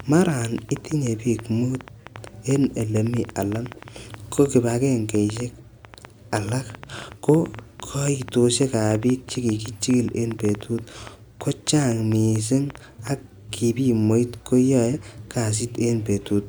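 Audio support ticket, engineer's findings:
Train of clicks, 0.00 to 13.08 s. Sharp ticks over the speech and in the pauses. Around a hundred of them, about 6.8 per second, spacing irregular. Same pulse shape each time. Peaks sit a few dB above the speech. Clean after 13.08 s. Likely cause: interference from nearby equipment or a faulty connection or power supply injecting short pulses into the signal path. Check cabling, grounding and interface.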